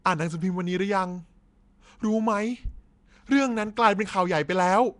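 From start to finish the speech carries a rough, hissy halo and a smeared, underwater blur, with nothing above 10.6 kHz. This is likely Nellymoser compression, the old Flash microphone codec, at a rate that fits about 44 kbps. Its fixed two bits per sample leave weak bands empty and refilled with noise, so the hiss clings to the voice itself. A plain low-pass filter would dull the sound without adding that grainy, noise-filled fuzz.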